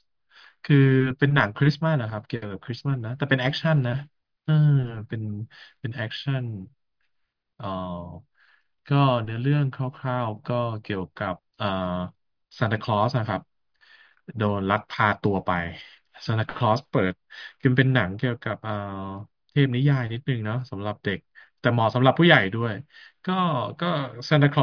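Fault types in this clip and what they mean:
Nothing stood out on listening to the speech in this recording.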